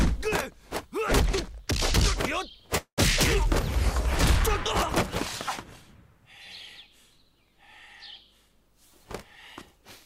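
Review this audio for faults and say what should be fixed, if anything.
Call audio freeze at 2.77 to 3.00 s. The last sound carries on as a fading buzz or hiss, then about 100 ms of silence, and the audio resumes exactly where it stopped. Nothing is lost, but about 202 ms of delay is inserted. The likely cause is packets stalling until the jitter buffer ran empty. Prevent it by sizing the jitter buffer for the network's delay spikes and removing the congestion that causes them.

Jitter buffer speed-up at 8.49 to 9.06 s. The sound runs about 108% of normal speed at unchanged pitch and comes across as hurried. The receiver is repeatedly cutting short pitch-period slices, about 50 ms in total, to drain excess buffered audio. Prevent it with steadier packet delivery so the buffer doesn't overfill, or by spreading the catch-up over a longer, less audible stretch.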